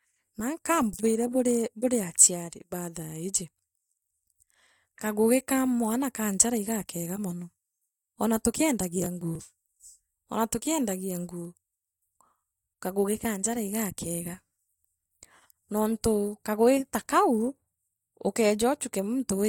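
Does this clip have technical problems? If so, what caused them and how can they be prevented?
Yes. From 9.02 to 9.40 s the speech is torn by a burst of processor overload crackle: the processor repeatedly failed to finish its audio buffers on time, and the missed blocks, around 10 ms each and roughly seven of them, were skipped. On the waveform this shows as short hard-edged dropouts; on a spectrogram, as thin broadband vertical stripes across the speech. Prevent it by enlarging the buffer or reducing competing CPU load during recording.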